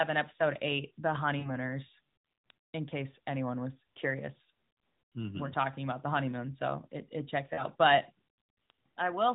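At 1.40 to 1.59 s and again at 7.54 to 7.63 s, lost AMR speech frames cause a brief smeared, fading dip. About 40 ms of signal is missing each time, which fits two 20 ms frames. The decoder bridges each gap with repeated, decaying parameters.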